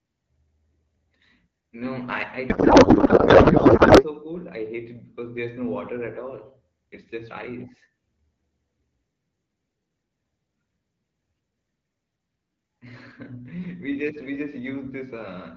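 From 2.49 to 4.05 s the speech gives way to garbled noise and warble that barely tracks it, a codec payload misread. The sound points to octet-aligned AMR frames being unpacked as bandwidth-efficient, so every field lands on the wrong bits and the decoder builds nonsense from apparently valid frames. The fault clears once both ends agree on the packing again. Outside it, the AMR wideband (HD Voice) codec at 12.65 kbit/s leaves only light coding damage.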